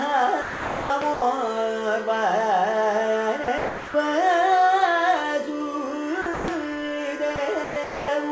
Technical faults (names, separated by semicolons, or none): sound chopped by the voice detector; sound dropped by the voice detector